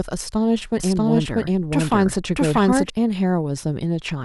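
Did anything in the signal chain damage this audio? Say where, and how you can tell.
Yes. From 0.80 s to 2.90 s there is a doubled audio track: a second copy of the speech trails the original by roughly 0.7 s, at about the same level. It has no decay or room colour, and it starts and stops abruptly. The likely cause is a second capture through a slower path in the driver or buffer stage, or an edit that left two copies out of step. On a spectrogram, each full-band pattern repeats intact about 0.7 s later. The waveform shows the overlapping copies.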